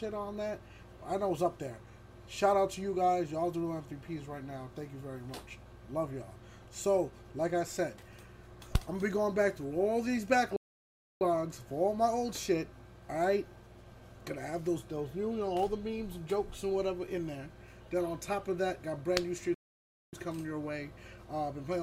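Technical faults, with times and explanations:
10.56 to 11.21 s and 19.54 to 20.13 s, playback stall. The sound cuts out in mid-flow and the output falls silent, for about 0.64 s the first time and 0.58 s the second. Each gap is a dead stop rather than a fade. After each break the sound comes back and carries on. The likely cause is the player running short of data or its thread being held up, so nothing reached the output until it caught up.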